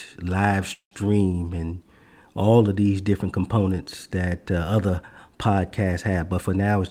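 A speech clip with two playback faults. At 0.73 s, just before "and all of these", there is a call audio freeze: the last sound is held and stretched into a decaying buzz that ends in about 100 ms of silence, and speech resumes at 0.94 s with nothing lost. About 179 ms has been inserted, so everything after plays that much later. The likely cause is packets stalling in transit until the jitter buffer ran dry, with the receiver concealing the gap until they arrived. From 6.38 s to 6.76 s, right after "that uh other podcasts", there is a jitter buffer speed-up. The speech plays at about 114% of normal speed with unchanged pitch and sounds rushed. This happens when the receiver holds more buffered audio than it targets and drains the excess by cutting many short pitch-period segments in succession, here totalling around 70 ms.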